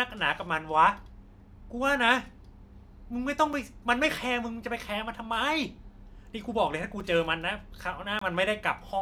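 At 3.53 s and again at 7.00 s the speech drops into a block of digital silence lasting about 6 ms, heard as a sharp tick. At 8.19 to 8.21 s a longer gap of about 23 ms sounds like a brief hole. The output buffer likely went unfilled: the short gaps fit a 256-sample buffer, the longer one a 1024-sample buffer. Unlike a fade-out dropout, the cut is instant, with no fade.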